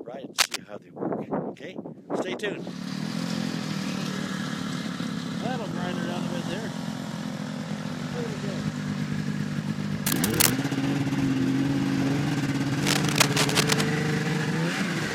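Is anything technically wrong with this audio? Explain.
Yes. Cable scratch noise occurs at 0.38 to 0.56 s, 10.06 to 10.51 s and 12.82 to 13.81 s. This is likely a worn cable or connector being moved, with its contact resistance jumping erratically. It produces dense, ragged scratching over the audio: slightly louder than the sound in the first two bursts, and about level with it in the longest, last one.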